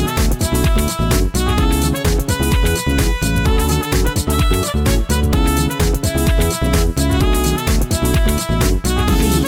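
Crude rate conversion runs throughout: the sound was moved from 44.1 kHz to 48 kHz by repeating the nearest sample without filtering, leaving a gritty, inharmonic fizz roughly 25 dB down that tracks loud, high sounds. Spectrograms show faint stray tones beside strong components, and waveforms show stair-step repeats.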